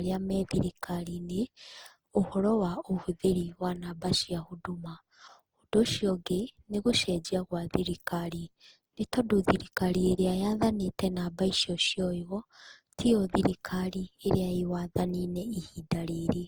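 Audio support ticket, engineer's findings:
Generation loss, whole clip. Speech sounds swirly, hollow and smeared, with blurred attacks, worse than one pass would explain. Likely repeated Opus re-encoding, around seven passes, fits 48 kbit/s. Each pass requantises on shifted frames, stacking noise and spectral holes.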